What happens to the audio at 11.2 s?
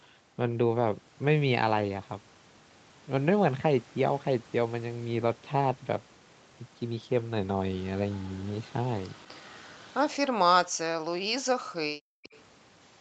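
At 11.2 s the speech is caught in a stretch of speech suppressed in double talk, running from 10.64 to 11.92 s. The level falls sharply, at its deepest by around 40 dB. In all, about a second is affected. The likely cause is the far side talking at the same time. The echo canceller could not tell this talker from the returning loudspeaker echo, so it turned both down.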